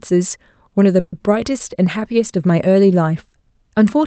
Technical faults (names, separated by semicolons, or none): call audio freeze